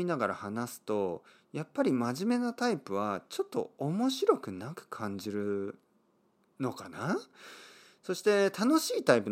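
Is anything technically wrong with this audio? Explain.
No technical faults detected.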